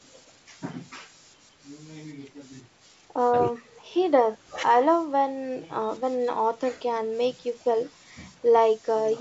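No faults in this speech; it carries the ordinary signature of a call microphone path, with the lowest bass trimmed by its high-pass filter.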